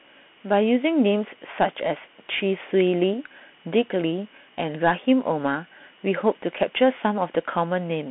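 Speech runs through a Bluetooth CVSD headset codec for the whole clip. The band is narrow, about 200 Hz to 3.5 kHz, and nothing passes above 3.8 kHz. The codec damage is plainly audible. CVSD sends one bit per sample, saying only up or down, with an adapting step. Fast, loud high sounds outrun that step and distort. S sounds turn scratchy. A granular hiss sits under the speech. The sound fits a 64 kbps CVSD link.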